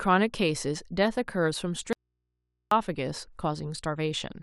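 The speech path likely lost its source for a moment while the stages after the break stayed live, causing an audio dropout to a faint residue from 1.93 to 2.71 s. For about 0.79 s the speech cuts out abruptly, leaving only mains hum around 55 dB below the speech level.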